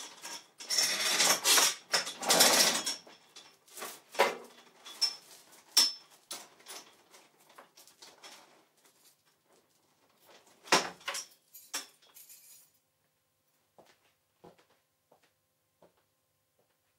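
Overlapping chunks at 2.37 to 2.40 s: the next 3-second chunk begins 23 ms early, so that stretch plays twice, heard as a brief click-like stutter.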